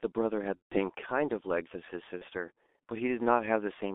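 Throughout, the G.723.1 codec at heavy damage limits the speech to about 250 Hz–3.6 kHz; its slow, low-rate model, consistent with about 6.3 kbit/s, leaves it muffled, hoarse and smeared. From 0.57 to 0.78 s, VoIP packet loss concealed by the speech codec stretches the sound into a fading buzzy tone or coloured noise, consistent with five lost 30 ms frames. A brief repeat at 2.18–2.25 s fits a single lost frame.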